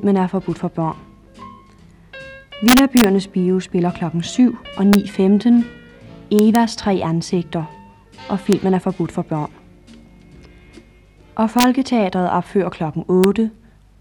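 Integer overflow hits at 2.68–3.04, 4.93–4.95, 6.39–6.55, 8.53, 11.59–11.64 and 13.24 s: peaks barely over the limit wrap to the opposite sign instead of clipping, so you get cracks on those peaks.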